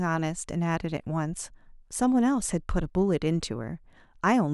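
No technical faults can be heard anywhere in the recording.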